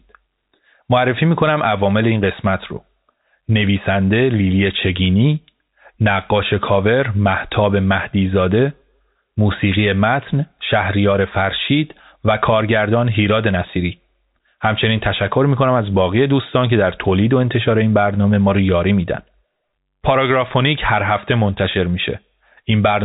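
No technical faults are audible.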